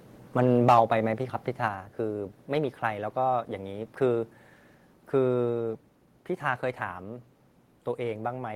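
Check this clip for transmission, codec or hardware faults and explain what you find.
Two hardware-side faults are present, both in the first two seconds of this speech clip.

From 0.39 to 0.79 s there is microphone overload, likely from input gain set so high that peaks exceed the converter's ceiling by about 6 dB. A few percent of samples are flattened, giving the loudest syllables a harsh, crackly edge.

At 0.69 s and again at 1.68 s the microphone volume is stepped down, likely by call software reacting to the clipping. Voice and background each drop abruptly, by about 3 dB and then about 4 dB.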